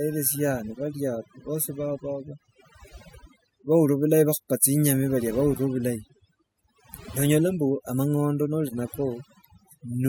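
From start to finish the speech carries overdone noise removal. The denoiser was pushed so hard it's switching individual frequency bands off near its noise estimate, so the gaps drop to near silence with twinkly specks, and the quieter parts of the voice go too.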